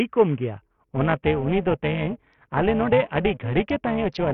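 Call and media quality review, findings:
Gritty, coarse speech with treble gone, throughout. Likely Bluetooth SBC compression at a starved bit pool, fitting roughly 48 kbps: top sub-bands unallocated, rest coarsely quantised.

Metallic buzz, about 11 dB deep at around 400 Hz, 0.62 s to end. Overlap-add ripple: frame overlap not summing to constant gain, level pumping once per frame.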